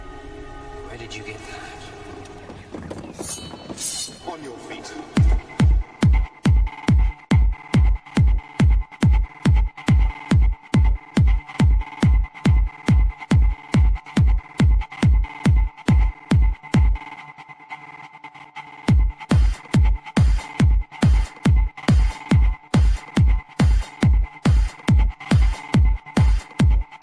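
No technical faults can be heard anywhere in the audio, which stays continuous and steady from its opening to its final moment.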